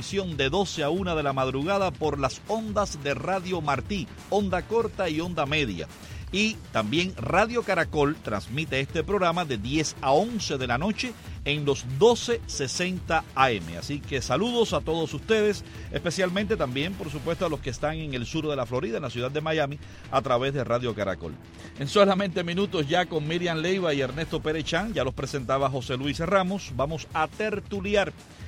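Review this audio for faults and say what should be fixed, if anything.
Nothing in the recording needs fixing, because no faults can be heard anywhere in it. No repair or preventive change is called for.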